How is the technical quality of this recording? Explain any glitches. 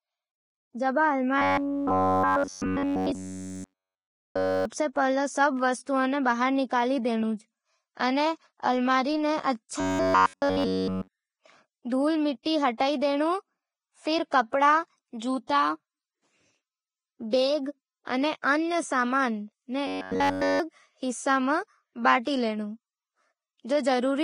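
The recording has clear technical faults: heavy compression damage throughout, three stretches of robotic buzzing, and one smeared attack.

Vorbis compression runs through the whole clip. The treble is hissy and grainy, with roughened tones and softened consonant edges. The damage is heavy and points to a low bitrate of roughly 25 kbps, likely from Vorbis encoding. The codec describes each moment's spectrum as a smooth outline plus coarsely quantised detail, so fine high-frequency structure turns into noise of similar energy. Unlike a simple low-pass filter, this leaves a fizzy texture rather than just dullness.

Robotic sound from repeated short buffers occurs from 1.38 to 4.65 s, ending just before "पहले सब वस्तुएँ", from 9.80 to 11.08 s, and from 19.87 to 20.60 s, ending just before "हिस्सां में बांट". In each stretch, essentially all the audio is a short slice played over and over while the real signal is skipped. 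This is likely caused by new audio arriving too seldom. The repeats impose a fixed 93.8 Hz buzz, which fits a buffer of about 10.7 ms, and the speech becomes a rigid metallic drone that only loosely tracks the syllables. The steady pitch distinguishes it from codec warble, which wanders and never locks to one frequency.

Pre-echo appears from 12.78 to 12.80 s. A hiss about 25 ms long comes before a sharp onset, and the attack itself sounds smeared. The transform codec spread quantisation noise across its whole block, so noise sized for the loud attack leaked into the quiet moment before it. Because the hiss comes before the attack, it is easy to tell apart from reverberation or a click, which come after the sound or at a single point.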